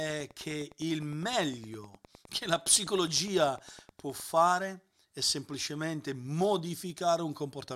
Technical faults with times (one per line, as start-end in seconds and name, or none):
0.00-4.25 Wi-Fi interference
2.42 dropped samples
6.90 dropped samples